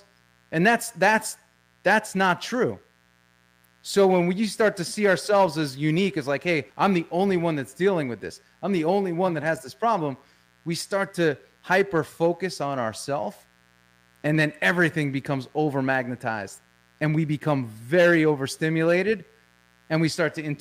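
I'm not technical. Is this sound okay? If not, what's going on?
No. A faint, raspy buzz runs under the speech from start to finish: mains buzz, electrical interference from 60 Hz power wiring leaking into the recording.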